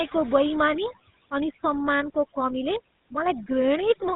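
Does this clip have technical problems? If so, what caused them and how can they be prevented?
Yes. Overdone noise removal runs through the whole clip. The reducer was set so aggressively that individual frequency bands sitting near its noise estimate get pulled down or switched off, and the quieter parts of the speech are carved away with them. What was background is now near silence dotted with twinkling specks. Prevent it by applying gentler reduction and keeping some residual noise.

The GSM full-rate codec also affects the entire clip, with plainly audible damage at about 13 kbps. This old phone codec imitates the vocal tract and feeds it a sparse train of regularly spaced pulses, so the excitation is decimated and everything above 4 kHz is gone. The result is a narrow, buzzy, gravelly roughness across the speech. Prevent it by routing through a wideband or higher-rate codec instead.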